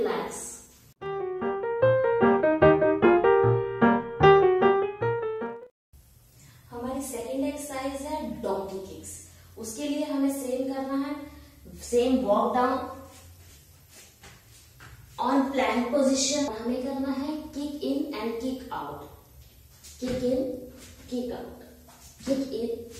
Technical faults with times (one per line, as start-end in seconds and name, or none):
none